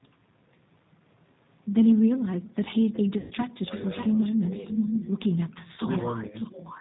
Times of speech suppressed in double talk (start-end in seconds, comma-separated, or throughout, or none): 3.66-4.78, 5.56-5.89, 6.30-6.35